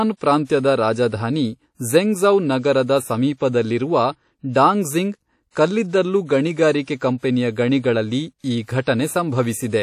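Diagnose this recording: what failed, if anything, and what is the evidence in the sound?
The codec stage failed: the speech likely passed through WMA compression, and the damage is plainly audible throughout. Long transform blocks smear quantisation noise into a washy, ringing hiss that breathes with the speech, and nothing remains above 15.3 kHz, which fits 48 kbps.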